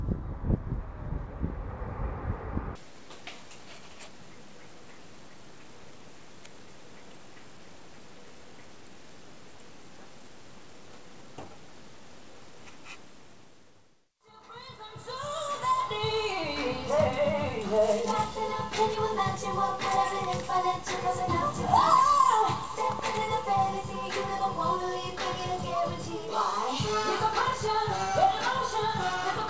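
The audio has come through a call path whose band stops at 8 kHz, which fits a wideband codec like G.722. The first real problem is a skip ahead at about 5.82 to 5.84 s. Roughly 0.4 s of audio just isn't there, and playback jumps straight to later material with no fill, so the two sides butt together abruptly. The jitter buffer likely threw that chunk away to claw back around 0.4 s of built-up delay. Not long after, from 6.43 to 6.67 s, there's a jitter buffer speed-up. The receiver trims a series of tiny pitch-period-sized slices, a few tens of milliseconds in total, so that stretch runs at about 114% speed. The pitch stays put, but it comes across as briefly rushed.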